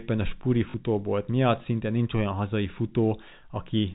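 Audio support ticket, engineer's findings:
Packet loss with last packet repeated, 0.70–0.74 s, just before "miatt szinte nincs olyan": 40 ms gap filled by replaying the previous packet, fits two 20 ms packets; brief robotic stutter. G.711 telephone band audible, 4 kHz ceiling.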